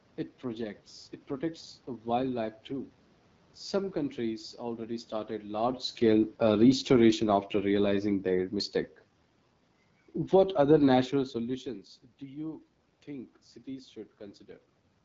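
From start to finish the speech carries AMR wideband (HD Voice) codec damage, plainly audible. The sound points to about 8.85 kbit/s, low enough to leave the pulse-modelled speech rough and raspy, with nothing above 7.5 kHz.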